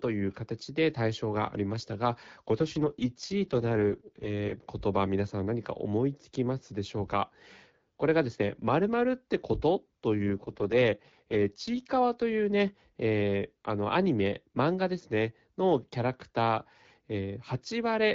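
A speech clip carried over an AMR-WB (HD Voice) call path, with two AMR rate drops: from 2.56 to 4.64 s and from 10.19 to 11.91 s the voice turns rough and synthetic, which points to the codec stepping down from 12.65 to 6.6 kbit/s. On a spectrogram the band and timing stay intact, with no gap, but harmonics blur into grainy noise. The waveform shows no break.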